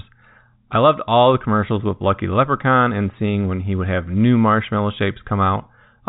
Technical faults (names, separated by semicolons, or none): none